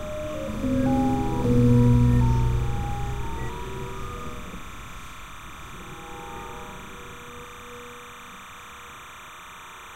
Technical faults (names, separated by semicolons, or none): timecode bleed